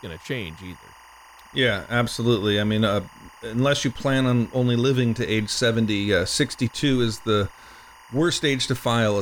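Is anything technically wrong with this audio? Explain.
Yes. Timecode bleed runs throughout the speech. Timecode at 24 frames per second leaks from a nearby line. It adds a faint chirping warble near 1 and 2 kHz.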